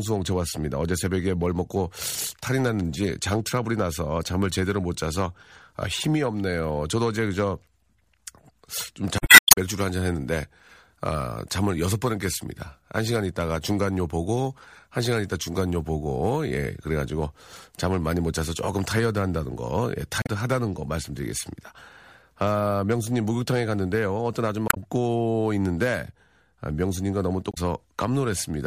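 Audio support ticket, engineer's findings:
Damaged data in a compressed stream: corrupted frames; decoder misreads or drops them and resyncs on the next header. Heard as chirp, squawk, click or short hole in the speech at 9.18–9.51 s, 20.22–20.29 s, 24.67–24.77 s, 27.50–27.58 s.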